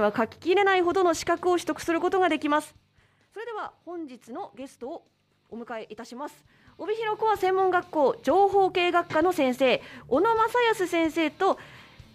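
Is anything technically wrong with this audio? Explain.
Yes. Zipper noise occurs at 2.52–2.88 s and 6.36–7.44 s. The level moves in unsmoothed steps of about 2 dB, then about 1 dB, roughly thirty per second. Each step clicks, making a fast ticking.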